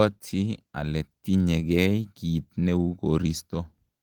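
No technical faults can be heard anywhere in this speech recording.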